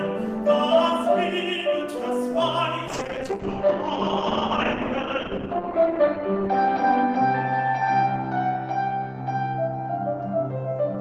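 A call bitrate drop starts at 2.91 s and runs to the end. The encoder was forced onto far fewer bits, consistent with a fall from about 32 to 8 kbps. Coding turns coarse and rough, and the bandwidth narrows from 20 kHz to 8 kHz, leaving it muffled at its worst for 2.84 s.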